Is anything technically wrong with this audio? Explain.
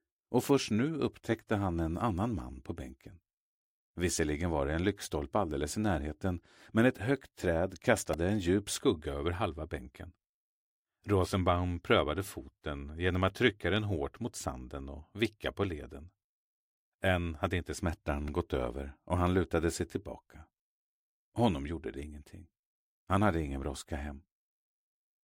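Yes. At 8.13 s and 18.28 s there are brief buzzy clicks from a repeated buffer: a 1.45 ms slice, fitting a 64-sample buffer, replayed four then two times when new audio arrived late.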